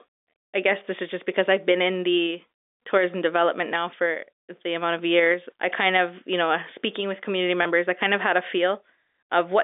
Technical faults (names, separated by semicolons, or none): packet loss with pitch repetition